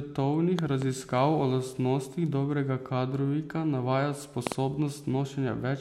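Loud pops, each a quick double, strike at 0.59 to 0.84 s and 4.47 to 4.54 s, the second even stronger, towering well above the speech. A voltage jolt, likely from a plug or switch, is added to the signal. Unlike a dropout click, the speech continues underneath, uninterrupted.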